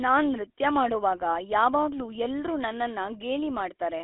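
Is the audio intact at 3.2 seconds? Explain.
No. At 3.2 seconds you're hearing GSM full-rate codec damage, which runs through the whole clip. The codec models the vocal tract and drives it with regularly spaced pulses, keeping only every third excitation sample, which fits a 13 kbps full-rate stream. That leaves the speech sounding plainly buzzy and gravelly, and the band is squeezed to roughly 300 Hz to 3.7 kHz, so there's no real low end and no air on top.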